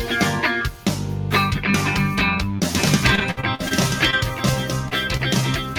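Noise suppressor applied to music or sounds, throughout: a speech-oriented suppressor treats sustained tones, ambience and decaying tails as noise and pulls them down, so level swings by about 5 dB. Onsets pass while held sound sinks, giving a pumping, thinned character.

Doubled audio track, from 2.75 s to 5.57 s: a second full-band copy runs about a second behind the original and about 5 dB quieter, most likely from the sound being captured again through a slower path. It has no room colour and cuts in and out abruptly.

Repeated packet loss (robotic sound), from 3.15 s to 3.72 s: about half a dozen holes, the longest 58 ms, were each patched by extending the previous sound. Roughly 30% of this stretch is concealed, so it turns choppy, with fragments missing.

Short concealed packet loss, at 4.10 to 4.14 s, 4.88 to 4.93 s and 5.17 to 5.21 s: each time about 20 ms failed to arrive and was filled by continuing the preceding sound, then blended back. 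Each one comes across as a brief smear or wobble.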